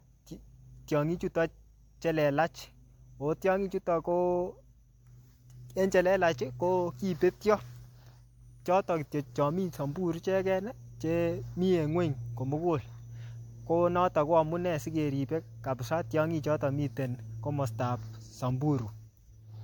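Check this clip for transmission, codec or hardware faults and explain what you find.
One fault runs through the whole clip: generation loss. The speech sounds swirly, smeared and hollow, and consonant attacks blur. It likely comes from about four rounds of MP3 encoding, near 96 kbit/s. Each pass requantises on a shifted frame grid, stacking noise and spectral holes.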